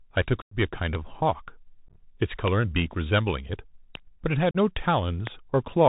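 The whole speech clip runs through the Bluetooth CVSD headset codec: a 64 kbps one-bit delta stream whose step size has to chase the waveform. Nothing gets above 4 kHz, s sounds come out scratchy, loud bright moments smear into distortion, and a grainy hiss sits underneath.

At 0.42–0.55 s there's unconcealed Bluetooth headset packet loss, with roughly 98 ms of audio just gone and replaced by silence. The hole has hard edges, and the speech comes back a touch quieter for a moment.

At 0.95 s a loud pop lands about 25 dB above the speech, a sharp single crack with the talking carrying on beneath it, likely a voltage spike from a plug, switch, static discharge or driver glitch.

Between 1.88 and 1.96 s the packet loss is scattered: about 49 ms missing across 75 ms, no single gap longer than 15 ms. That reads as a short burst of crackly, chopped-up speech rather than a clean dropout.

The same kind of pop hits again at 2.48 s and 3.95 s.

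At 4.51–4.56 s there's another clean dropout of about 38 ms.

A final pop comes at 5.27 s.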